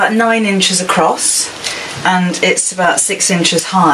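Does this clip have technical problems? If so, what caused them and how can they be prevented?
Yes, there's gain pumping all the way through. The gain swings roughly 15 dB, so everything sounds squashed. That's likely input gain set far too high, with a fast limiter clamping down on each peak. Setting a sensible input level and backing off the limiter would prevent it.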